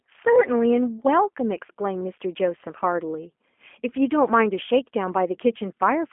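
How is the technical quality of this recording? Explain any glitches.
Technical quality is limited by G.729 codec coding, audible across the whole clip. The speech sounds telephone-band, roughly 250 Hz to 3.4 kHz with nothing above 3.5 kHz, which fits an 8 kbit/s G.729A stream. Each 10 ms frame is rebuilt from a vocal tract filter, a pitch predictor and a few pulses, so the speech takes on a plainly audible rough, synthetic buzz.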